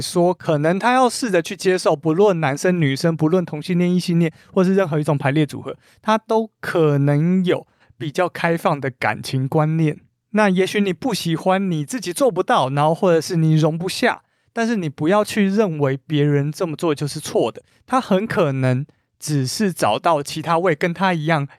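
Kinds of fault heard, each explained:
No faults can be heard in this recording.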